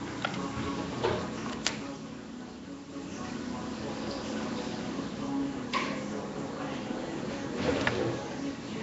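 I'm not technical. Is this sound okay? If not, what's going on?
No. Throughout the clip the sound is rough and hissy, smeared as if underwater, and nothing above about 7.7 kHz survives. That likely comes from Nellymoser compression, an old Flash codec that fills quiet detail with noise. That noise is what separates it from plain muffling.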